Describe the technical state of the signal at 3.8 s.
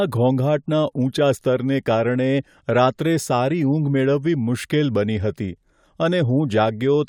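Nothing is wrong with the speech at 3.8 s; the signal is intact at that moment.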